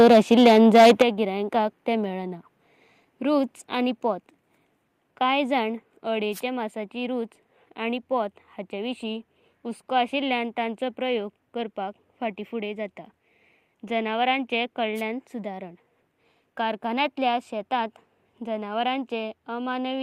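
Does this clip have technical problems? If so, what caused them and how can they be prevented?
Yes. From the start to 1.02 s the speech shows microphone overload: peaks are driven roughly 9 dB past the converter's full scale, so a sizeable fraction of the waveform, around a tenth of it, is flattened at the ceiling. The cut-off tops add a harsh, crackling edge to the loudest syllables. The cause is likely an input gain set too high for the talker's level and distance. Setting the input gain so that loud peaks stay several decibels below full scale prevents it.

At 1.02 s, just before "तेंया गिरायंकाक ते", the level drops by about 10 dB in a single step. This is a microphone volume stepped down event. Both the speech and the background fall together, which points to the device's input gain being lowered, rather than the talker moving away. Coming straight after the clipped opening, this is likely the call software's automatic gain control reacting to the overload. 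Setting a correct input level from the outset, or disabling automatic microphone adjustment, avoids the sudden step.

Two wireless microphone noise hits occur, at 6.32 to 6.41 s and at 14.95 to 15.02 s. Each lasts under a tenth of a second and is heard as a brief swish of static over the speech. In an analogue FM link, the received signal fades when reflected paths cancel the direct one. The receiver's noise then rises and briefly masks the audio. Diversity receivers, a clear line of sight, and shorter transmitter-to-receiver distances prevent these dropouts.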